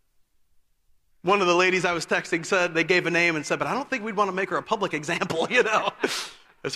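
Speech recording with no technical faults detected.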